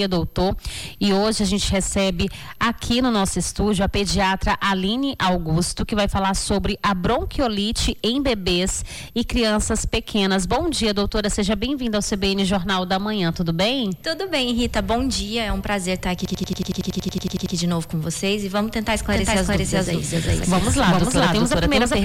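A system hang loop runs from 16.25 to 17.55 s: a 92.88 ms slice of audio repeats exactly 14 times at 10.8 Hz, a machine-gun stutter from a frozen driver while the hardware cycles one ring buffer, which fits a 4096-sample buffer. A doubled audio track starts abruptly at 19.10 s and lasts to the end: a dry, full-band copy at about the same level trails the original by around 400 ms, likely from a second, slower capture path or an edit holding two copies.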